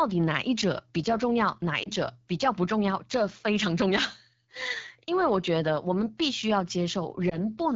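From the start the whole recording carries the rough, raspy texture of the AMR wideband (HD Voice) codec at one of its lowest rates. The damage is plainly audible and fits roughly 8.85 kbit/s. The codec models the vocal tract and drives it with sparse pulses below 6.4 kHz, and at this rate there are too few bits to shape those pulses well. The top band, from 6.4 to 7 kHz, is only synthesised noise. Unlike narrowband telephone coding, the sound is not muffled. It keeps some airy brightness, but its harmonic body sounds coarse and buzzy.

Two brief disturbances come from lost AMR speech frames, one from 1.83 to 1.90 s and one from 7.29 to 7.38 s. Each comes from a single lost 20 ms frame. When a frame fails, the decoder reuses the previous pitch and vocal tract settings at reduced gain, which gives a short dip or warble. Recovery over the next moment sounds a little weak or rough. What marks these as concealment is the smooth, tonal fill that keeps the preceding sound going. 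A dropout or packet-loss gap would instead cut to silence or click.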